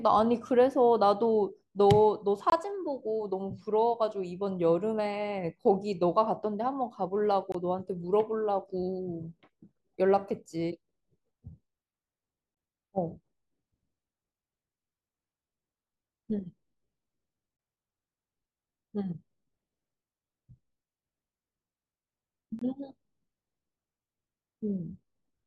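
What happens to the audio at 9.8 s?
Nothing goes wrong at 9.8 s; the speech carries on there without any dropout, click, glitch or other audible fault.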